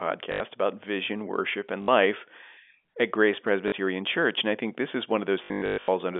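Packet loss with last packet repeated at 0.32–0.40 s, 1.82–1.88 s, 3.68–3.72 s and, scattered, 5.44–5.88 s after "I think this is", where replayed audio buzzes roboticly at 50 Hz, fitting 20 ms packets.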